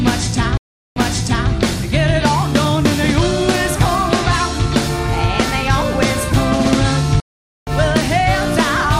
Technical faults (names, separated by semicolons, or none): stream reconnect